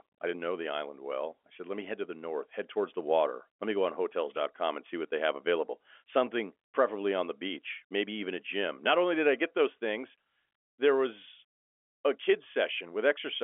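No faults found in this speech; it is carried over G.711 telephone coding, so the band stops at about 3.7 kHz with the usual 300 to 3.4 kHz line character.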